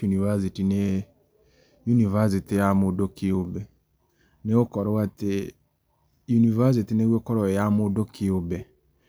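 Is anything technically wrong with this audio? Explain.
No, nothing technically wrong can be heard in this speech recording; the signal stays intact and steady throughout.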